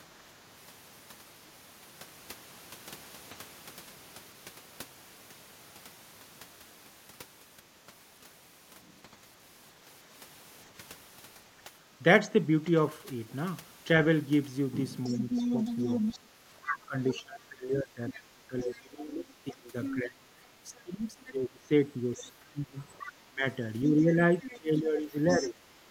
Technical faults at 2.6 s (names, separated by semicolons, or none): none